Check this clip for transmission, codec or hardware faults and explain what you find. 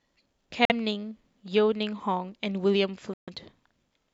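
Two brief gaps in this speech are audible. From 0.65 to 0.72 s and 3.14 to 3.30 s the sound cuts to silence, most likely a Bluetooth dropout, where packets missed the headphones' deadline. Speech resumes further along, as if it had continued. A spectrogram shows clean vertical blank bands; the waveform, flat stretches with sharp edges.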